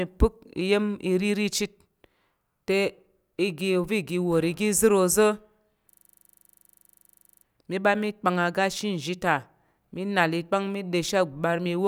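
Speech, interrupted by a system hang loop from 5.92 to 7.44 s: the driver stalled while the hardware replayed one 40 ms buffer, giving a rapid 25 Hz machine-gun stutter.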